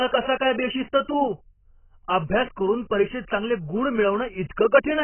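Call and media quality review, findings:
AAC compression, throughout the speech: likely a very low-bitrate AAC-LC encode starving the quantiser, so nothing survives above 3.1 kHz. Heavy codec damage: dull, band-limited speech with smeared, warbling sibilants, consistent with a bitrate near 12 kbps.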